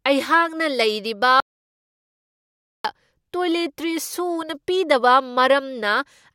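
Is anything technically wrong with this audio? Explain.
Yes. From 1.4 s to 2.85 s this speech clip has an audio dropout to silence. The sound stops abruptly mid-flow and returns just as abruptly about 1.44 s later, with nothing at all in between, not even room tone. The likely cause is a lost input, such as a disconnected device, a failed link or an accidental mute, while recording carried on writing zeros. Whatever was said in that stretch is gone. On a waveform it shows as a flat line at zero. On a spectrogram it appears as a fully black vertical band with hard edges.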